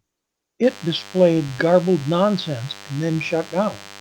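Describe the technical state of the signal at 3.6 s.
At 3.6 s, DECT cordless phone buzz is present: a nearby handset's 100 Hz radio bursts are rectified by the audio circuit. This produces a thin, harmonic-rich buzz well below the speech, running from 0.63 s to the end.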